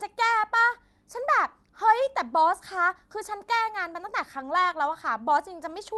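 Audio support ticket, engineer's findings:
No audible faults found in this speech recording.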